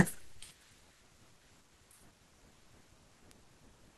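At 3.31 s a bit error spike occurs: one flipped bit jolts a single sample to about -26 dBFS, producing a brief broadband tick unrelated to the speech.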